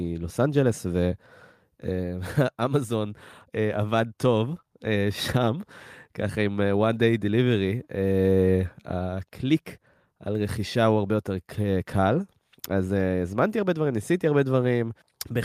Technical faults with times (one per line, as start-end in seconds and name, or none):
none